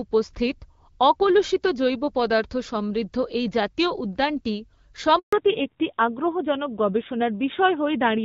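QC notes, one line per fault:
5.19 to 5.33 s, handover gap: the speech fades out within a few tens of milliseconds and stays silent for 140 ms while the call switches from one network link to another. Nothing said during that span is recovered. Unlike packet loss with concealment, there is no buzzy or robotic filler and no stretched repeat of the last sound, only a clean hole. Unlike a brief dropout, it marks the exact point where the call's sound changes character.
5.33 to 8.25 s, fallback to narrowband: after the gap, everything above 4 kHz disappears until the end, so the speech loses its sibilance and air and sounds duller. The light HD Voice coding before the switch kept the upper band and sounded clear, which fits AMR-WB at about 12.65 kbit/s. The later texture is rougher and grainier, which fits a low-rate narrowband codec around 7.4 kbit/s. A simple low-pass filter would only dull the sound. 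This fault also adds coarser codec roughness, and it begins at a network switch.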